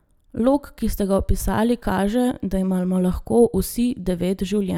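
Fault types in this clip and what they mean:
No faults detected in this speech recording; nothing to list.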